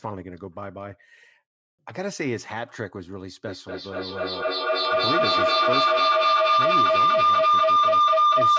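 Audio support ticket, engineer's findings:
Feedback howl from 3.46 s to end of clip. Tone near 1 kHz builds to about 11 dB above the speech, loop repeating roughly every 200 ms. Two devices on the same call in one room. Loop gain exceeds unity and nobody muted.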